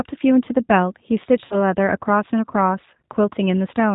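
G.729 codec damage runs through the whole recording. The band stops at 4 kHz, and the sound points to the G.729A variant at around 8 kbit/s. Each 10 ms frame of speech is rebuilt from a vocal tract filter, a pitch predictor and a few pulses rather than from the waveform itself. That coarse excitation is plainly audible: the voice is dull and slightly rough and synthetic.

VoIP packet loss concealed by the speech codec occurs from 1.45 to 1.56 s. About 60 ms of audio went missing, which fits three lost packets of 20 ms each. The decoder filled the gap by extending its last pitch and filter settings while turning the gain down frame by frame. The result is a stretched, buzzy tone or coloured noise that fades. Because each frame depends on the previous one, the voice stays weak and smeared for a short time after the gap.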